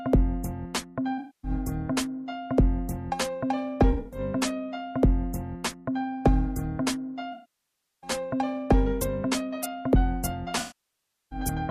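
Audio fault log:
1.18–1.51 s: AAC frame loss with concealment. About 256 ms of audio is missing. The decoder repeats the last good spectrum with scrambled detail, so the gap sounds smeared and noisy.
3.91–4.20 s: AAC frame loss with concealment. Short dropouts scattered over 213 ms, the longest around 70 ms. The result is a brief phasey flutter.
7.32–8.10 s: AAC frame loss with concealment. A 704 ms loss. The concealment decays to a very faint noise floor and then fades back in.
10.59–11.39 s: AAC frame loss with concealment. A 725 ms loss with the same fade down and recovery.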